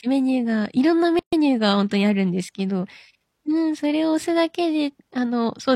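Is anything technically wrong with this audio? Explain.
Yes. There is a gap at a join of encoded pieces from 1.19 to 1.33 s, where the speech stops dead for about 0.13 s. The audio appears to have been encoded in separate segments and spliced together without trimming, so the encoder's start-up delay and the padding of the previous segment's final frame both remain. The result is a short, abrupt hole with smeared edges, after which the speech resumes exactly where it broke off.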